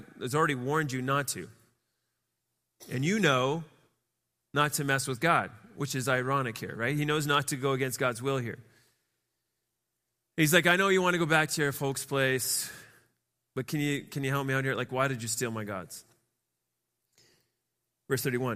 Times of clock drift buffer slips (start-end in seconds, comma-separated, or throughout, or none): none